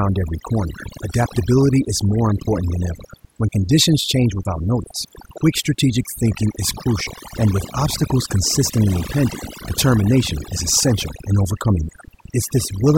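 A speech recording in which the background collapses into near silence dotted with twinkling specks throughout. This is overdone noise removal: a noise reducer set too aggressively switches off individual frequency bands near its noise estimate, taking the quieter parts of the voice with them.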